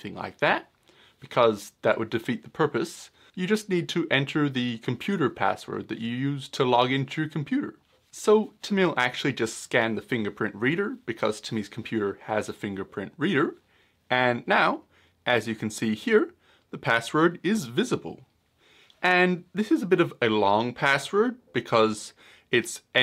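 No technical faults can be heard anywhere in this audio.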